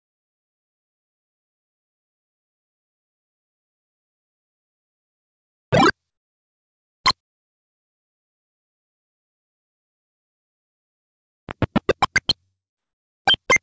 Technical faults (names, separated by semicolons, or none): jitter buffer slow-down